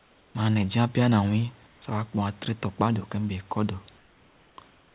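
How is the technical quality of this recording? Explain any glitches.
The recording has one recurring glitch: comfort noise in place of the background. It appears in four pauses: 0 to 0.35 s, 1.67 to 1.82 s, 3.98 to 4.58 s, and 4.7 to 4.95 s.

In each gap the real room hiss turns steady and featureless, about 3 to 4 dB quieter. The sender likely stopped transmitting during silence, and the receiver filled the gap with synthetic noise. The sound also has nothing above 4 kHz, which fits a narrowband call codec.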